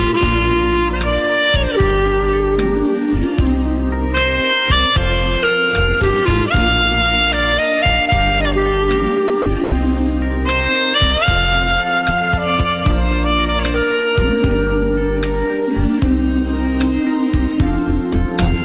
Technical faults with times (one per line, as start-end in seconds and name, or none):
9.28-9.72 sound dropped by the voice detector